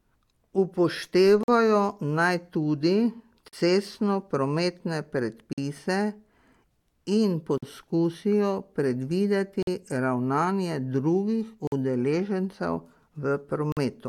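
At 1.43, 3.48, 5.53, 7.58, 9.63, 11.67 and 13.72 s the speech drops out for about 48 ms each time, a gap between chunks. The stream arrives in 2.0 s blocks, and silence is inserted at every join, one just before "cestno prometne" and one right after it. Each sounds like a brief hard-edged hole in the flow. On a waveform these are flat silent stretches with abrupt edges. A spectrogram shows evenly spaced vertical blank bands.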